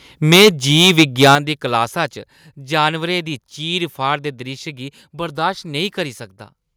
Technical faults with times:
0.32-1.35 microphone overload
0.36 microphone volume stepped down
1.35 microphone volume stepped down

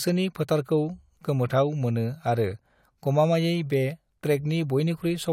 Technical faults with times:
none

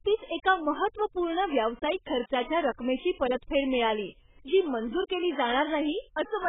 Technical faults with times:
0.00-6.49 AAC compression

